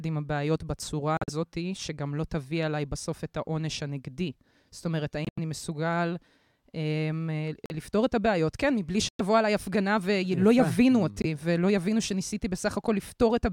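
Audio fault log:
1.17–1.30 s, 5.25–5.39 s, 7.66–7.72 s, 9.09–9.21 s, 11.22–11.25 s: corrupt frame muted. Hard silences of 0.03 to 0.14 s cut in abruptly, sized in steps of about 25 ms, which fits whole damaged codec frames being rejected and replaced with silence. The surrounding speech keeps its timing, with no stretching or repeated material as in concealment.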